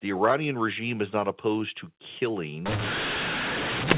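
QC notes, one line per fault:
2.66–3.97 s, mu-law and A-law mixed up: from this point to the end, telephone speech coded with the mu-law curve of G.711 is decoded as A-law, so each 8-bit code maps to the wrong level. Some samples come out too loud and others too soft, and the quietest ones jump well above silence. The speech turns harsh and gritty, and the gaps fill with hiss, unlike the clean narrowband sound before 2.66 s.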